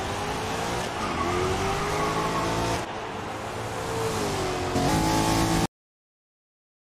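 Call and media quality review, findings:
Cut-off end at 5.66 s: final buffers never written to output, likely a capture or playback path stopped before flushing. Sound halts mid-event, drops straight to digital silence with no decay through 6.87 s.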